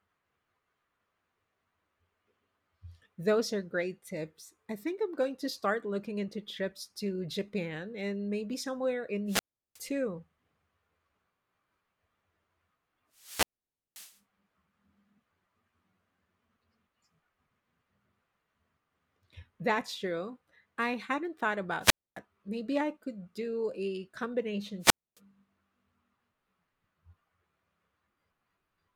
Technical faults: wireless microphone squelch dropout

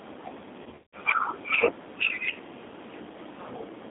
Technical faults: G.729 codec; VoIP packet loss concealed by the speech codec

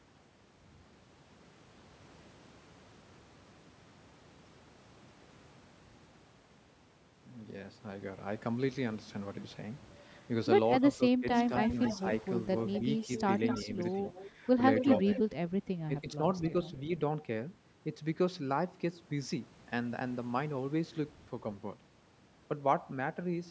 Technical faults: speech suppressed in double talk; echo leak

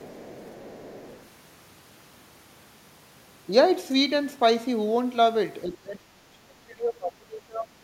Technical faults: other side's voice leaking through; speech suppressed in double talk

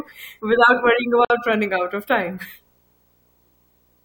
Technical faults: video or display buzz; gap at a join of encoded pieces

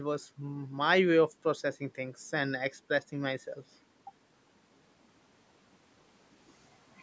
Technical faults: none

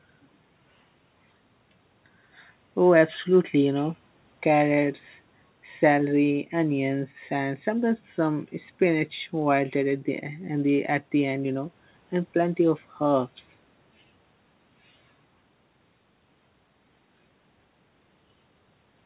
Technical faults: none

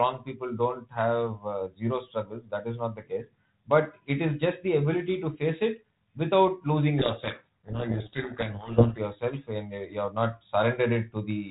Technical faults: codec payload misread

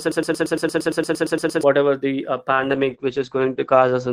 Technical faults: broken-record loop; call bitrate drop

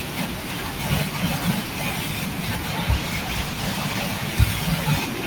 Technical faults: call bitrate drop

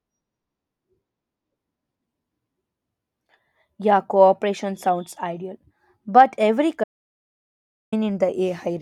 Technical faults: audio dropout to silence

